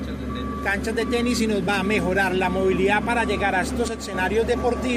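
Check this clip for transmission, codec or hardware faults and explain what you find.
There's one fault here, a brief one. From 3.88 to 4.14 s the level takes a sudden dip of about 6 dB and then comes straight back. That's the signature of one channel dropping out. The likely cause is that one side of the stereo feed went silent for that quarter-second. Once the two sides are summed to mono, anything shared by both loses half its contribution, so it steps down abruptly, and anything carried only on the missing side vanishes until it returns.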